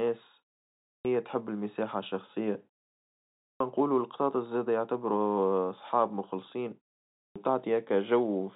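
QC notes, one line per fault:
0.76–1.05 s, 3.34–3.60 s, 7.07–7.36 s, clipped start after a pause: after short silences, "تحب المساحة الشخصية" and "نقولو القطاطس زادة يعتبروا" start abruptly, missing about 0.26–0.29 s of onset, because the output device slept and needed time to wake.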